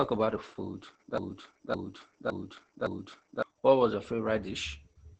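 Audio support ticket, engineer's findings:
Opus voice compression, whole clip: muffled, hoarse, slightly robotic speech; SILK coding at what sounds like about 10 kbps. Spectrogram shows an empty band above 9 kHz and smeared harmonics.

Broken-record loop, 1.18–3.42 s, right after "about the food": a 0.56 s fragment repeats four times, back to back. Likely cause is a stalled player or stream. Waveform shows identical repeating blocks.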